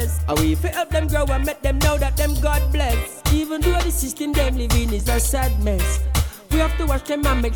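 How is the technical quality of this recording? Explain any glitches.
Nothing here stands out as a glitch; I didn't hear any dropouts, clicks, distortion or other technical faults anywhere in the recording.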